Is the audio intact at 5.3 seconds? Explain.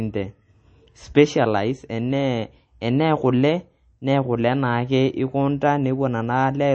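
No. At 5.3 s, as throughout, the speech has MP3 compression damage, likely from about 32 kbps. Treble stops at 8.3 kHz. Flickering dropped frequency lines sound watery.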